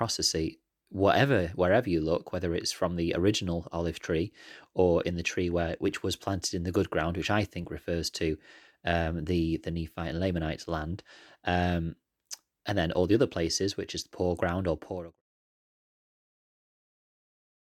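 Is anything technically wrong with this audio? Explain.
No, nothing is technically wrong.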